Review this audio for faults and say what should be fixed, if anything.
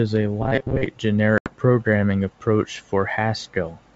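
From 0.42 to 0.86 s, new audio likely reached the player too seldom, so it looped the last short buffer. That is robotic sound from repeated short buffers. About half the sound is repeated chunks, giving a rigid metallic buzz near 133 Hz, which fits buffers of roughly 7.5 ms. Larger playback buffering or a proper concealment routine would prevent it.

From 1.38 to 1.53 s, packet loss on an ADPCM call drops 80 ms of the G.722 stream, which fits about four packets. The gap is filled with hard-edged silence. The decoder's predictor and step size then fall out of step, so the sound resumes slightly distorted before settling. Adding jitter buffering, loss concealment and a decoder state reset after gaps would prevent it.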